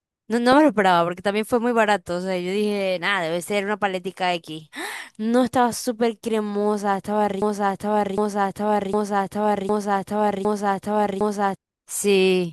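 A stall in the player, encoder or stream likely froze output on its last buffered fragment, producing a broken-record loop in this speech clip: from 7.42 s to 11.56 s a piece about 0.76 s long repeats exactly five times back to back, and the speech meant for that stretch is lost.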